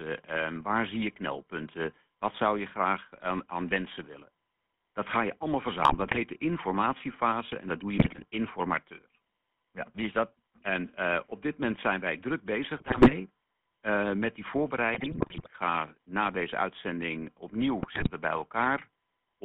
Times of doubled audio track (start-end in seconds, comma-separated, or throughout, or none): none